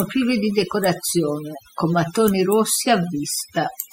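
Throughout the speech, the background between phrases drops to near silence scattered with twinkling specks, and the voice itself has its softer edges worn away. This is overdone noise removal: a noise reduction stage set far too aggressively has pushed individual frequency bands down or out entirely wherever they sat close to its noise estimate, taking quiet parts of the voice along with the noise it was meant to remove.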